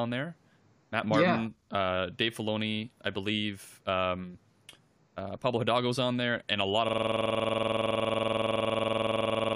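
A speech clip hit by a system hang loop: from 6.89 s, after "there and a lot", a 46.4 ms fragment, which fits a 2048-sample buffer, repeats at 21.5 Hz to the end, giving a rough buzz, identical repeating waveform blocks and evenly spaced vertical spectrogram stripes.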